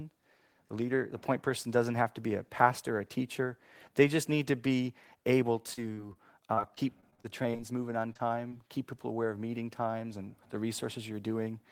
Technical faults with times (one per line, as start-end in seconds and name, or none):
5.73-6.17 repeated packet loss (robotic sound)
6.53-7.61 repeated packet loss (robotic sound)
8.13-8.21 short concealed packet loss
8.49-8.53 short concealed packet loss